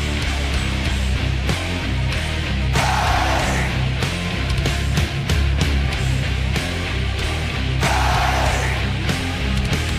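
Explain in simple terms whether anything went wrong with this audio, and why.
A short click or stutter comes back at a steady beat, at 1.18, 3.19, 5.20, 7.20 and 9.21 seconds, roughly every two seconds. This is overlapping chunks. The audio was handled in pieces about 2 seconds long, and each new piece began about 7 milliseconds before the previous one finished. That tiny sliver of sound plays twice at every join, so the seam shows up as a regular hiccup.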